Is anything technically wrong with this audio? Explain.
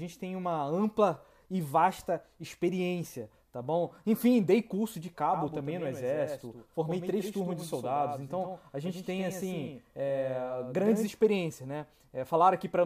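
Yes. From 5.34 s to 11.10 s there is a doubled audio track. The same signal is likely reaching the mix a second time through a slower path, so a full-band copy trails the original by roughly a tenth of a second at a level a few dB lower. The result is a flat, slapback-style double with no decay or room colour, which cuts in abruptly at 5.34 s and drops out just as suddenly at 11.10 s.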